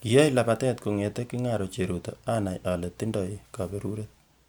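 Nothing in this speech recording points to a technical fault at any point.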